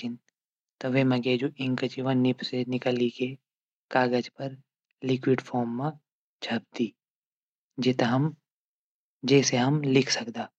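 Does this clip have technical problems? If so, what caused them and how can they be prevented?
No, there are no technical problems to diagnose in this speech clip, so nothing needs preventing.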